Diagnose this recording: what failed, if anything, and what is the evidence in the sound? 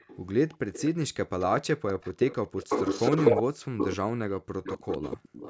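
Echo leak at 0 to 0.18 s, 0.51 to 0.57 s, 0.73 to 0.9 s, 1.39 to 1.62 s, 1.87 to 3.43 s, 3.78 to 3.96 s and 4.64 to 5.5 s. Each time, a copy of the speech trails it by 249 ms. The copy is faint in the early scraps and becomes roughly as loud as the speech itself from 1.87 to 3.96 s. The stage is call processing: a loudspeaker echo canceller likely let residue through. On a spectrogram, each syllable's pattern reappears a quarter-second later.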